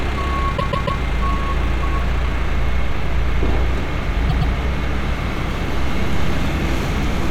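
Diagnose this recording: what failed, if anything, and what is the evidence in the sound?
A stutter where the same short slice of sound plays over again. From 0.57 to 1.0 s a 144 ms block plays three extra times, and from 4.29 to 4.53 s a 120 ms block repeats twice more. These are repeated frames at the codec or storage stage: a run of compressed frames, apparently several per block, was written more than once, so the decoder replays it. This adds 432 ms and 240 ms to the audio.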